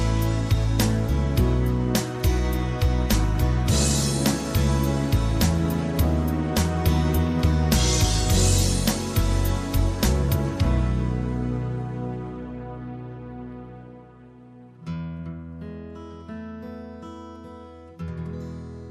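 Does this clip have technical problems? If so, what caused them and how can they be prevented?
Yes. From 0.65 to 6.32 s there's video or display buzz: a screen or video cable is leaking into the audio, giving a 75 Hz buzz locked to the display's field rate, sitting roughly 30 dB under the sound. Keep audio cables away from monitors and video leads, and use balanced lines.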